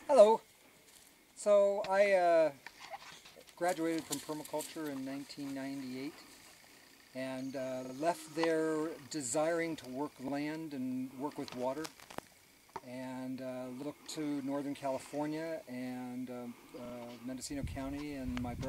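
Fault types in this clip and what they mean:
Repeated buffer: late data made the device replay its last block; four hard-joined stutters, each a 43 ms piece heard again once or twice.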